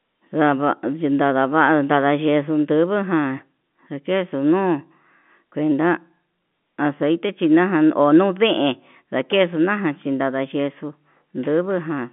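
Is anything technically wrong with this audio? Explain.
No, nothing here is technically wrong.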